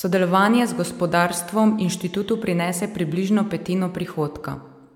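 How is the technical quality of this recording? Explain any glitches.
The recording is marred by generation loss running through the whole speech clip. The sound is swirly, smeared and hollow, more degraded than a single encode at this quality would leave it. The likely cause is repeated MP3 re-encoding, about four passes at a rate that fits 128 kbit/s. Each pass requantises on a shifted frame grid, so noise and spectral gaps pile up and consonant attacks blur. On a spectrogram, the upper bands show patchy holes beneath a sharp ceiling near 19.9 kHz, and transients in the waveform look softened.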